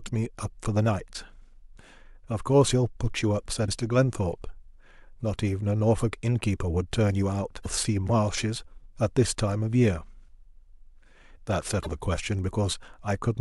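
At 3.65 to 3.69 s, 7.62 to 7.66 s and 11.82 to 11.87 s, there's a short chirp, squawk, click or hole, about 40 ms each time, from damaged data in a compressed stream. Some bytes in the encoded file got lost or scrambled, so the decoder misread the frames there, lost its place and had to hunt for the next valid frame header. What comes out meanwhile is misdecoded or missing, which is that brief blip cutting across the speech.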